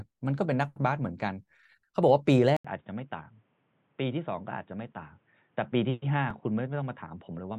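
Speech, with two faults. At 2.57 s the sound goes quiet for 80 ms, then returns dull and boxy. Nothing reaches above 3.8 kHz, the level drops by roughly 5 dB, and a faint new noise floor sits well under the speech. This lasts to the end. The likely cause is the input switched to a poorer device. At 6.31 s there is a brief click or buzz. A tiny piece of audio plays twice with a hard join. That is a repeated buffer, and it fits a buffer of about 5 ms played once more. No audio is lost.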